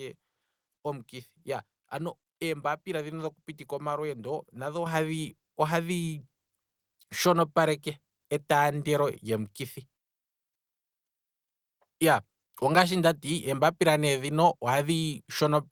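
At 4.86 s, right after "dhoku pitika omalweendo nadho", the microphone volume is stepped up by about 7 dB in a single jump. The call software's input-level control judged the microphone too quiet and raised the device's input volume at once, with no gradual ramp. Because the change happens ahead of any processing, the speech and the background noise floor become louder together. It is heard as an abrupt lift in level.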